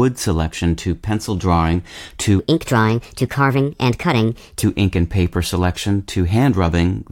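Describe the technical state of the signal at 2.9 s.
At 2.9 s the speech sits inside a section at the wrong speed. It runs from 2.39 s to 4.63 s. Here the audio plays about 1.32 times faster than it was recorded. Speed and pitch rise together, so the voice jumps up by about five semitones and sounds high and hurried. The likely cause is the section being replayed or resampled against the wrong clock. Normal speed and pitch return abruptly at 4.63 s.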